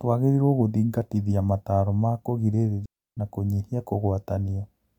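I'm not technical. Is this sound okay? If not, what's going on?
No. From 2.86 to 3.17 seconds the speech drops into a clean hole of near silence, about a third of a second, with no crackle around it, just before "na kũnyihia". That is a digital wireless dropout: the wireless link lost too much data, so the receiver briefly muted.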